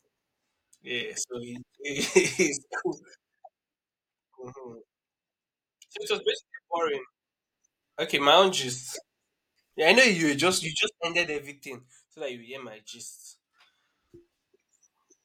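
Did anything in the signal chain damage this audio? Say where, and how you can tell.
Yes. Zipper noise from an unsmoothed gain stage ticks through level changes at 2.32–3.8 s, 7.08–8.16 s and 10.56–11.6 s: audible 3 dB steps, unlike a clean fader ramp.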